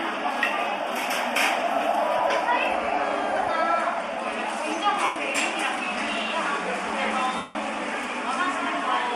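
Lost LE Audio frames hit this recording of everyday sounds at 2.17–2.20 s, 5.04–5.16 s and 7.36–7.55 s. The LC3 decoder refills each gap with the last spectrum under random signs, so sound smears into noise, and the longest gap fades toward silence. The gap lengths fit 7.5 ms frames.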